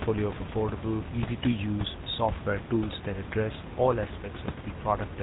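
Throughout the speech, the GSM full-rate codec is plainly audible. Everything above 4 kHz is gone. Pulse-driven excitation leaves a buzzy, gravelly roughness, fitting a 13 kbps rate. Room noise sits about 10 dB below the speech.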